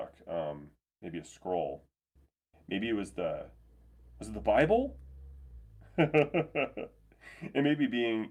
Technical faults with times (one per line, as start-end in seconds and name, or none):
none